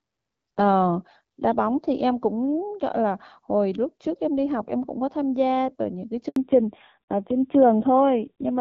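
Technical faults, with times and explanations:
6.28–6.36 s, handover gap: while the call switched networks no speech frames arrived, so the voice cuts to silence for 80 ms and that stretch is lost.
6.36 s to the end, fallback to narrowband: the clear HD Voice link dropped to a low-rate narrowband codec, so nothing above 4 kHz remains and the voice turns dull and rough.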